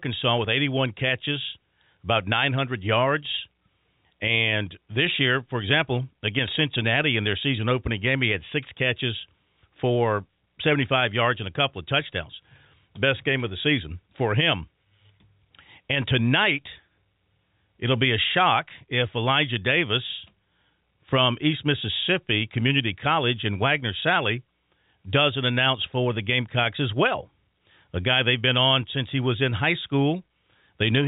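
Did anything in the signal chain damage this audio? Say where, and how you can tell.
No, nothing in the signal chain damaged this audio.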